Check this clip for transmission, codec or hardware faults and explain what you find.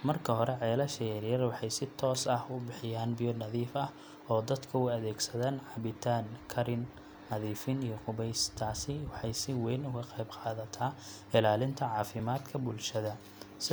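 One fault is present: clock drift buffer slips, recurring from 1.9 s to 12.2 s, with the first arriving just after "yaryar waxay si". The likely cause is two devices in the chain each running on its own clock and disagreeing by roughly 0.1%. The buffer between them steadily fills or drains until a block of around 150 samples is dropped or repeated. That happens about four times, every 3.43 s, and each slip is heard as a short click or pop in the speech.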